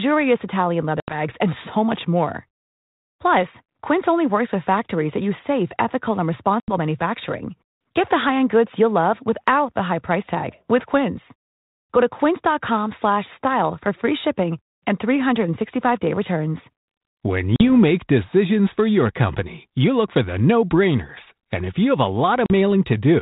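A speech recording with four hard-edged silent gaps, each followed by briefly distorted speech: 1.0 to 1.16 s before "and so much more", 6.6 to 6.74 s after "use safe ethical and", 17.56 to 17.62 s before "make decisions for your", and 22.46 to 22.51 s. These are packet loss on an ADPCM call. Roughly 80 ms (the first two) or 40 ms (the last two) of audio went missing as a few packets, leaving the decoder's predictor and step size out of step until they resettled, over the light G.726 coding at 32 kbit/s.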